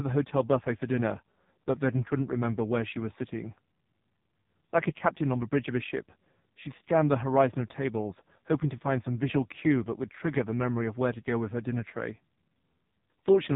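From start to finish the speech sounds buzzy, thin and synthetic, with nothing heard above about 3.8 kHz. This is the AMR narrowband mobile codec at heavy compression. The codec samples at 8 kHz and rebuilds each 20 ms frame from a vocal-tract model driven by a few pulses, and here the bit budget is so tight that the result fits one of its lowest modes, near 5 kbps.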